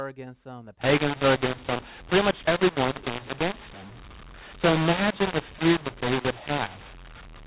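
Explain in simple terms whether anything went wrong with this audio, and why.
From 0.81 s, just after "against them the", to 7.46 s, the speech turns harsh and gritty, and the pauses fill with noise. This is mu-law and A-law mixed up: telephone audio written as A-law was read back as mu-law, which scrambles loudness and lifts quiet moments into hiss.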